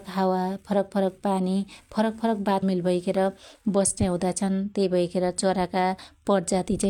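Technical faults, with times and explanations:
2.58 to 2.63 s, stream segment skipped: Right after "फरक पानी फरक फरक" the speech jumps forward abruptly, with a short blip lasting about 50 ms. The sentence does not continue where it left off. A later part resumes instead, cutting across the flow of the words. The likely cause is that one segment of the stream failed to load, and the player moved on to the next one. The missing stretch is simply never played.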